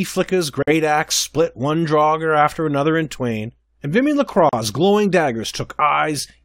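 At 0.63 to 0.68 s, just before "axe split one drogger", and again at 4.49 to 4.53 s, the speech drops out for 50 ms and 38 ms: a gap at a join of encoded pieces, where encoder start delay and final-frame padding were left untrimmed. Each silence has smeared edges, then speech resumes where it stopped.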